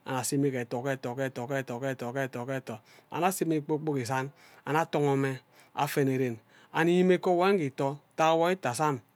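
A short piece of speech, and nothing technically wrong turns up anywhere in it.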